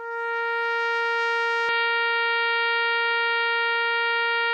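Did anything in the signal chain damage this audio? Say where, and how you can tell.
Yes. At 1.69 s the music abruptly turns dull, with nothing above 4.9 kHz and a faint new noise floor. This points to an input switched to a poorer device at the driver stage, likely.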